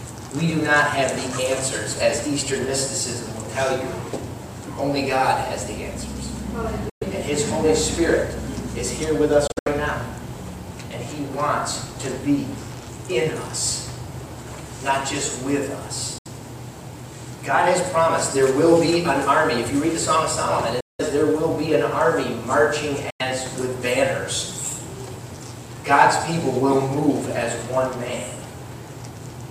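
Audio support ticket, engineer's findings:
Abrupt silent holes, sound resuming as if it had played on: 6.89–7.03 s, 9.47–9.68 s (broken into several short gaps), 16.18–16.27 s, 20.80–21.01 s, 23.10–23.22 s. Likely Bluetooth dropout: packets arriving late at the headphones, discarded, output muted until good packets return.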